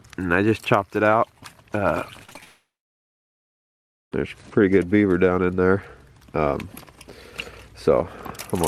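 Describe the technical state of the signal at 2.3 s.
Repeated packet loss runs from 2.23 to 2.43 s: packets kept dropping, each gap up to 29 ms patched by extending the previous sound, leaving choppy, robotic audio.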